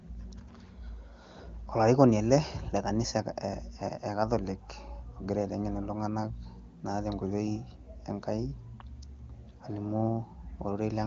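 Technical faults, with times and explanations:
No technical faults are audible.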